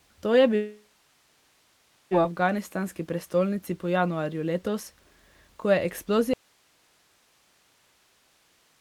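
Speech clip. From 0.55 to 2.14 s the sound smears into a fading buzz or hiss, then about 1.2 s of silence, and about 1.56 s of audio is simply gone, likely a long network dropout. After "ko je" at 6.34 s the signal cuts abruptly to faint hiss roughly 40 dB down until the end, likely an audio dropout to a faint residue with the downstream path still live.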